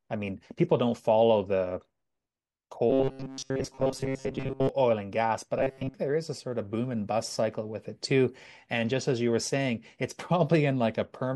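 From 2.90 to 4.69 s and 5.59 to 5.94 s, robotic sound from repeated short buffers turns the speech into a fixed 134 Hz metallic buzz, likely from about 7.5 ms segments looping.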